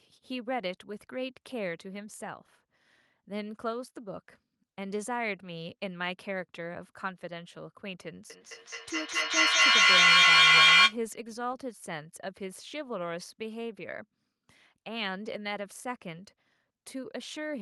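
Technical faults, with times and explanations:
8.3–11.01 s feedback echo between two devices: another device replays this microphone, so the sound returns roughly every fifth of a second, piling up to about 15 dB above speech in evenly spaced waveform bursts.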